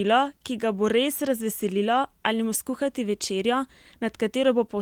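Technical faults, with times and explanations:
No technical faults are present in this speech clip.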